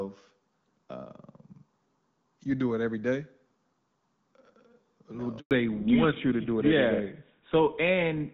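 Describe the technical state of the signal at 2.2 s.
At 2.2 s the signal is intact, with no fault to report at that moment, only the AMR wideband (HD Voice) coding that runs through the clip at 12.65 kbit/s working as it should.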